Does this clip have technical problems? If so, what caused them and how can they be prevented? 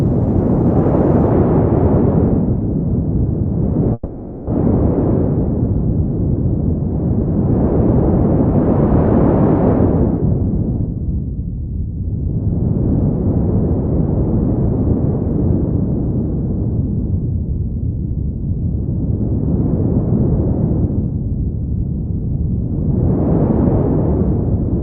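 Yes. From 3.93 to 4.51 s a long network dropout likely occurred: the sound continues as a fading buzz, then near-silence, and about 0.4 s of material never returns. A brief packet loss would leave only a short smear. A steadier network connection, or redundancy and forward error correction on the sending side, would prevent this.

Jitter buffer speed-up occurs from 16.19 to 18.99 s (about 1% faster, roughly 40 ms removed) and from 20.71 to 22.54 s (about 2% faster, roughly 50 ms removed). Short pitch-period slices are cut out after delayed audio piles up, so the audio runs faster while its pitch stays the same, unlike resampling. Reducing network jitter, or allowing a larger target buffer, would prevent these catch-ups.

Throughout, the call codec cuts the highs above 8 kHz, consistent with Opus at around 24 kbps.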